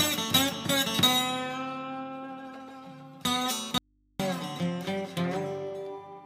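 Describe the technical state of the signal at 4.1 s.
At 4.1 s the signal is inside an audio dropout to a faint residue, running from 3.78 to 4.20 s. The wanted sound vanishes abruptly for about 0.42 s. Only mains hum remains, around 40 dB below normal level. The cause is likely a broken input with the downstream path still live.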